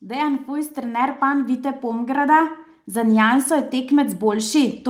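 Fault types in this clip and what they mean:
Automatic gain rising: the gain control judged the input too quiet and kept turning it up, so from 0.05 s to the end the speech and the background noise swell together, whereas a talker raising their voice would leave the noise floor unchanged.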